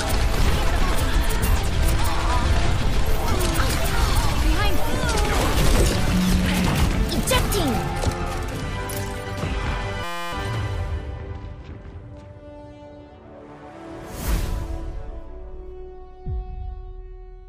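From 10.04 to 10.33 s the audio freezes into a system hang loop: a single 5.8 ms fragment repeats exactly, roughly fifty times, producing a steady buzz at about 172 Hz instead of the programme material. The fragment length fits a 256-sample ring buffer that the output hardware kept replaying while the host or driver stalled. Playback then resumes with little or no audio apparently skipped.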